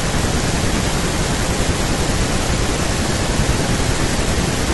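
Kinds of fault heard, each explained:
Damaged data in a compressed stream: In two short spots of this speech, part of the coded data is corrupt, so the decoder misreads the affected frames, loses its place in the stream and must lock back onto the next valid frame header. The result is a brief synthetic squawk or blip in place of the intended sound, first from 1.09 to 1.13 s and again, shorter, from 4.08 to 4.10 s.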